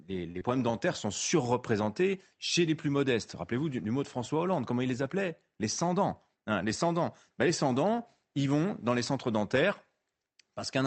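From 0.31 to 0.37 s, a packet arrived late and the jitter buffer ran dry, producing a short stall from a late packet. Instead of leaving a gap, the receiver kept stretching the last bit of speech for about 35 ms until the packet turned up, then carried on from where it had stopped. Nothing is lost, but that moment is held a touch too long, with a faint buzz or dip, and everything after it sits 35 ms later than before.

Right after, at 0.39 to 0.43 s, comes a short concealed packet loss: about 20 ms of audio never reached the decoder in time. The receiver filled the hole with 19 ms of synthetic continuation, extending the pitch of voiced sound or shaping noise where the sound was unvoiced, then crossfaded back into the real signal. The result is a brief smear or wobble.

From 5.93 to 6.44 s, the buffer had built up more audio than its target, and the receiver trimmed it back with a jitter buffer speed-up. 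It cut out many short slices of one or a few pitch periods, removing roughly a twentieth of a second in total, so this half-second of speech plays at 108% of normal speed. The pitch stays put, but the delivery sounds slightly hurried. Throughout the clip, the Opus call path caps the audio at 8 kHz, and its coding noise points to a bitrate of around 32 kbps.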